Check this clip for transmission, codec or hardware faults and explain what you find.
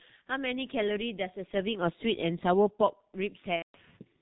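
Two faults are present: a low-rate telephony codec across the whole speech clip, and one packet-loss gap near the end.

G.723.1 codec, throughout: this early internet-telephony codec codes speech in 30 ms frames with a slowly updated voice model. The heavy coding damage fits its 6.3 kbit/s mode. Nothing above 4 kHz survives, so the speech sounds muffled and hoarse, with smeared consonants.

VoIP packet loss concealed by the speech codec, 3.56 to 3.77 s: about 180 ms of audio went missing, which fits six lost 30 ms frames. The decoder filled the gap by repeating its last pitch and filter at falling gain, producing a fading buzzy tone or coloured noise that is muted from the third lost frame on, and the speech stays weak briefly afterwards.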